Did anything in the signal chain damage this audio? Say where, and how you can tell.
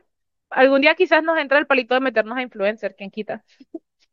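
No, nothing damaged it.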